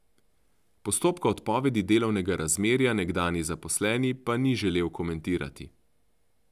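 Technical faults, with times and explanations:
No technical faults are present in this speech clip.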